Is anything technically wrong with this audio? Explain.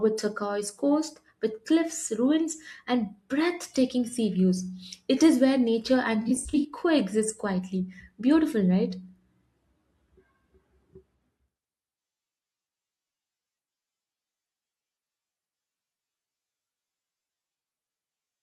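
Yes. Between 6.21 and 6.65 s there is AAC frame loss with concealment. About 256 ms of audio drops out in short bursts spread over roughly 430 ms, the longest run around 70 ms, which suggests roughly a dozen missing frames. The decoder patches each gap from the last good spectrum with randomised phase, so the speech turns smeared, hissy and phasey. On a spectrogram, harmonics blur into flat noisy blocks; the waveform shows uneven, loss of detail patches.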